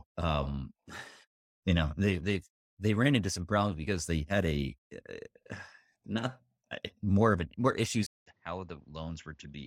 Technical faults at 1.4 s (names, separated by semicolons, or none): none